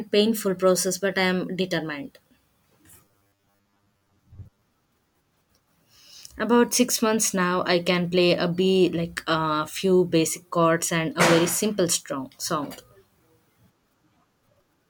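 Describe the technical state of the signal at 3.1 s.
At 3.1 s the signal is near the start of robotic sound from repeated short buffers, running from 2.98 to 4.62 s. The likely cause is audio arriving too seldom, so playback keeps looping a short slice, and roughly half of this stretch is repeated material. The sound becomes a rigid metallic buzz at 100 Hz, which fits a 10 ms loop. A spectrogram shows evenly spaced harmonic lines at multiples of 100 Hz, and the waveform shows identical cycles repeating.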